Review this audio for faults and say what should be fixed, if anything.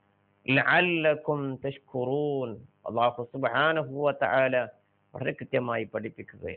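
A noise suppressor built for speech was left running on this audio. Throughout the clip it treats steady and sustained parts of the sound as noise. The level swings by around 5 dB as it reacts, so the sound pumps and thins.

The sound is cut by the noise suppressor at 0.0 to 0.47 s, 1.79 to 1.94 s, 4.72 to 5.15 s and 6.12 to 6.44 s. In each stretch the suppressor misjudges held or decaying sound as noise and pulls it down by up to about 12 dB. Sharp onsets pass, but what follows sinks away.

To prevent this, turn off speech-oriented noise suppression when recording or sending anything other than speech.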